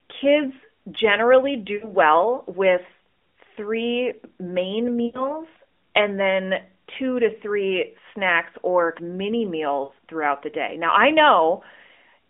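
Brief drawn-out, fading dropouts at 1.76–1.92 s after "kids generally", 5.06–5.35 s after "with three main", and 9.84–9.91 s before "throughout the day". These are lost AMR speech frames: corrupted frames, about 60 to 80 ms each, were concealed by repeating the last good settings at falling gain.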